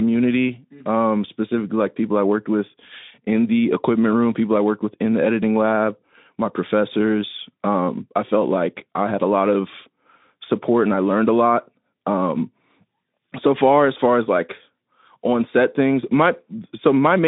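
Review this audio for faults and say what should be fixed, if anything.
Nothing stood out on listening to this speech clip, so there is nothing here that needs fixing.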